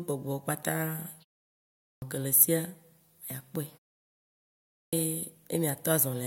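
At 1.65 s and again at 4.52 s the speech has a clipped start after a pause. After gaps of about 0.49 s and 0.82 s, the output device was still waking or relocking, so roughly 370 ms and 410 ms of sound were swallowed. Each phrase, including the one leading into "ke le esia" at 2.02 s, starts abruptly without its first sounds. On a waveform, flat silence jumps straight into the speech. A spectrogram shows no onset ramp, just a hard vertical edge.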